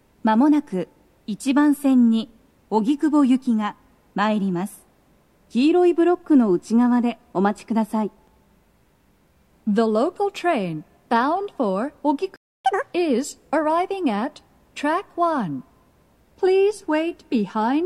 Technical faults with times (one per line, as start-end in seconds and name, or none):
12.36-12.65 playback stall
12.65-12.93 catch-up at higher speed